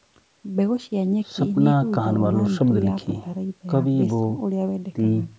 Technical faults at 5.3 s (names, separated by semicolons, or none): none